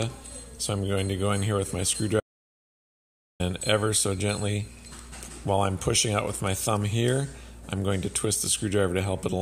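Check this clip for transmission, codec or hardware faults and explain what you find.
There is one fault: an audio dropout to silence from 2.20 s to 3.40 s, about 1.2 s long. The sound cuts off abruptly mid-flow and resumes just as abruptly, and the gap between is silent with no room tone or noise floor. That points to the input signal being lost while the recorder kept writing silence, likely through a momentary disconnection, a link failure or an accidental mute. Whatever occurred during those 1.2 s is unrecoverable.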